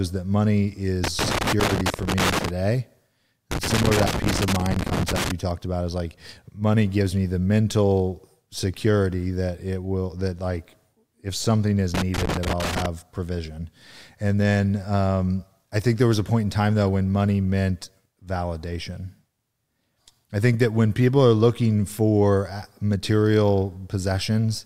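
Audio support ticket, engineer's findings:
Loose connector crackle in speech, three bursts: 1.04–2.49 s after "that money", 3.51–5.31 s before "talked about is like", 11.94–12.86 s after "like if something is". Worn or dirty contact making and breaking, chopping signal. Irregular scratchy bursts, not evenly spaced clicks like buffer dropouts.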